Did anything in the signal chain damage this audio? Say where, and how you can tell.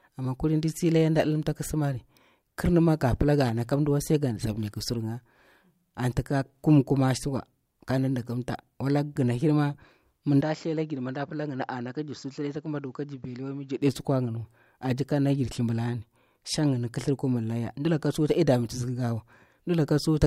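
Yes. At the capture stage, the input was likely switched to a poorer device from 10.41 to 13.82 s. Across that span the speech turns dull and boxy, with nothing above 7.6 kHz, and it drops by around 10 dB. It also brings in a faint new noise floor of its own, roughly 45 dB below the speech. The change happens with no gap at either switch, and the full, brighter sound returns at 13.82 s.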